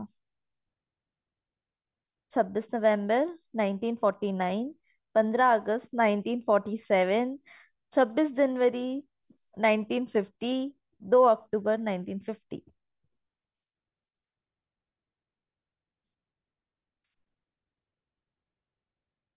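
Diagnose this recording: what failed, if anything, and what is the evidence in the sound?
Nothing in the recording points to a failure at any stage of the chain. The speech runs continuously, with no event in the sound that would mark a fault.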